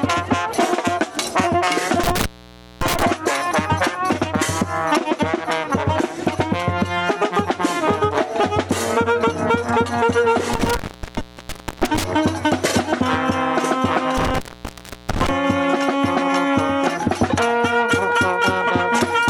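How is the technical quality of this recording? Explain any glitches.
Quality is compromised by three dropouts from an intermittent contact, at 2.03–3.03 s, 10.54–12.04 s and 14.17–15.29 s. A loose cable or plug briefly opens the signal path for about 0.56 s, 1.02 s and 0.69 s. The audio cuts out with crackle at each edge, leaving faint hiss during the gap.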